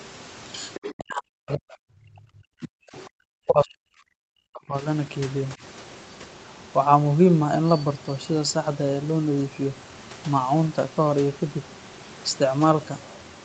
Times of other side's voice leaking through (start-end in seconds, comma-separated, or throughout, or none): 0.74-0.93, 2.98-3.07